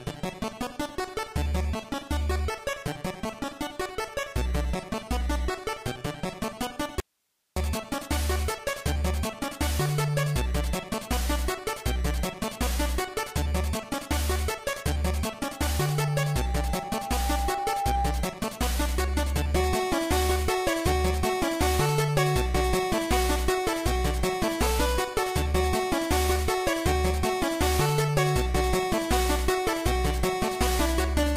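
At 7.0 s the sound cuts out abruptly for about 560 ms, to 7.56 s, leaving only hiss roughly 50 dB below the signal. This is an audio dropout to a faint residue, likely a brief loss of the source while the downstream path stayed live.

From 15.48 s to 18.49 s a loudspeaker feedback squeal builds over roughly three seconds into a steady 797 Hz tone, reaching about the level of the signal. The microphone is picking up its own loudspeaker, and loop gain above one at that frequency sustains the howl.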